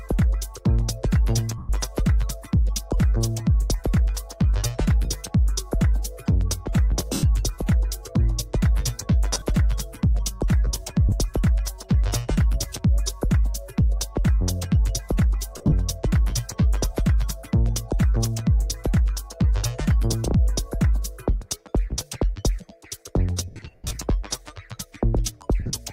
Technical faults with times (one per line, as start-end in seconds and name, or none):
1.58-1.70 lost LE Audio frames
7.13-7.23 lost LE Audio frames
9.34-9.42 lost LE Audio frames
11.09-11.12 lost LE Audio frames
15.58-15.72 lost LE Audio frames
23.48-23.96 lost LE Audio frames
25.60-25.73 lost LE Audio frames